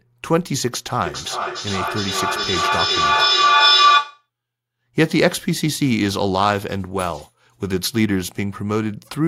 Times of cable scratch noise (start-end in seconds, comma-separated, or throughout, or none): none